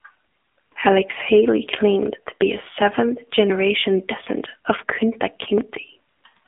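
Throughout the speech, the AMR narrowband mobile codec shapes the sound. Nothing above about 3.7 kHz survives, and the band sits roughly between 250 Hz and 3.5 kHz. The codec rebuilds each 20 ms frame from a vocal-tract model fed by a few pulses. It does not carry the waveform itself. At this low rate the damage is plainly audible. The voice turns buzzy and synthetic. The thin, boxy tone points to AMR-NB at around 7.4 kbps.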